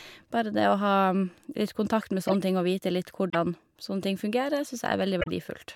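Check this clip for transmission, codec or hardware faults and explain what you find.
Three faults from damaged compressed frames are audible in this speech, two decoded and one muted.

Corrupt frame decoded, at 2.28–2.33 s (after "kontakt med", before "ting og vite") and 5.20–5.29 s: flipped bits gave the decoder wrong gains or codes, so roughly three and then four frames played as short, fairly loud chirps or bursts, the second louder. On a spectrogram they show as brief smears of energy that ignore the speech harmonics. On the waveform they are spiky, blocky segments.

Corrupt frame muted, at 3.30–3.35 s (after "ting og vite", before "sånne ting"): the decoder rejected the damaged data and the player inserted silence. The 50 ms gap is consistent with about three frames. It starts abruptly, appears as a flat line on the waveform and a vertical blank band on the spectrogram, and timing stays intact.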